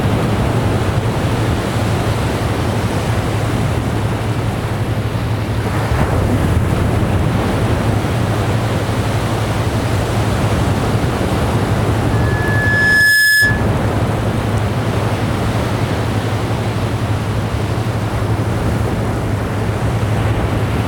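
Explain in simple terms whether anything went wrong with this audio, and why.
Loudspeaker feedback squeal appears from 12.12 to 13.68 s: a whistle near 1.7 kHz swells over about a second until it's louder than everything else. A microphone picked up its own loudspeaker, and that one pitch kept re-amplifying itself in a loop.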